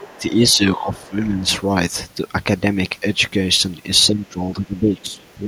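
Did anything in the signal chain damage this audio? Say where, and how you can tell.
Yes. A faint second voice sits under the speech at 0.0–0.19 s, about 20 dB down, then returns in fainter scraps at 0.79–0.86 s, 1.06–1.11 s and 4.9–5.34 s. That is the other side's voice leaking through, likely loudspeaker echo the call-processing echo canceller failed to remove.

The talker's level sags by about 10 dB at 0.17–0.32 s and 0.54–1.47 s, and by about 15 dB from 4.11 s to the end, each dip overlapping that leaked voice. This is speech suppressed in double talk, likely the echo canceller turning everything down while both sides spoke.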